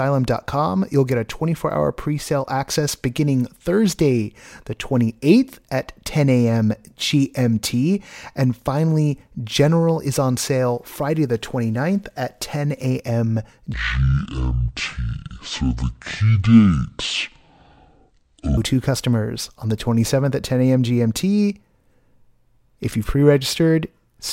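From 13.74 to 18.57 s, before "customers on the", a section at the wrong speed, likely from a clock mismatch, plays at 0.541x. Speech drops about ten semitones and slows, and on a spectrogram the harmonics sink lower and pack closer together.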